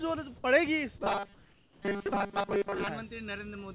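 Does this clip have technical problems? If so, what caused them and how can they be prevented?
Yes. Between 1.34 and 1.82 s, the sender likely stopped transmitting during a pause, and the receiver filled the gap with comfort noise in place of the background. For those 480 ms, the real background, sitting about 29 dB below the loudest sound, turns into a smoother synthetic noise about 4 dB quieter before the original sound returns. To prevent it, disable discontinuous transmission (DTX) on the sending side, or raise the comfort-noise level and spectral detail so it better matches the actual background.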